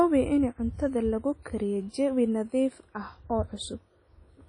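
WMA compression runs throughout, with plainly audible damage: the speech sounds washy and ringing, hiss swells and fades with the signal, and nothing remains above 10.1 kHz. This is likely a transform codec at around 32 kbps, zeroing weak components and smearing quantisation noise.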